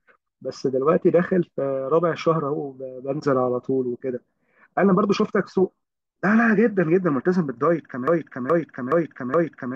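At 8.08 s the speech locks into a broken-record loop: a 421 ms fragment repeats exactly, back to back, four times through to the end of the clip. The audio due in that span never plays. The likely cause is a stalled player or stream resending its last buffered piece.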